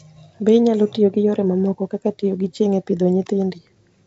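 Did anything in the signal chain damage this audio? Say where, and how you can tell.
No, nothing in the signal chain has damaged this speech. What the chain does leave audible is G.722 wideband telephone coding, with the band stopping near 7.7 kHz and a faint grain in the coded bands that fits its 56 kbit/s mode.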